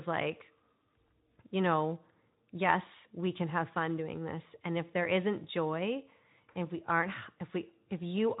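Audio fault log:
No faults heard anywhere in this speech recording.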